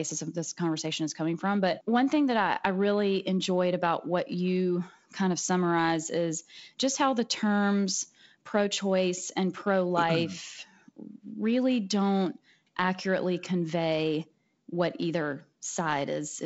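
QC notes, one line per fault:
Nothing to flag here, just speech carried over G.722 wideband telephone coding, topping out around 7.7 kHz with the light graininess that fits its 48 kbit/s mode.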